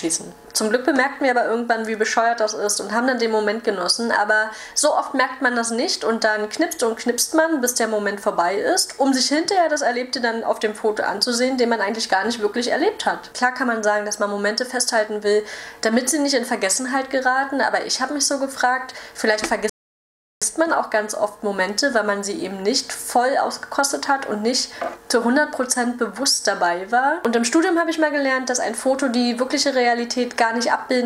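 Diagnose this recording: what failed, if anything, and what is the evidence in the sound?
At 19.70 s the sound drops to dead silence, then picks up at 20.42 s exactly where it left off, with nothing skipped. This is a rebuffering stall at the playback stage: the player exhausted its downloaded audio and waited, adding about 0.72 s.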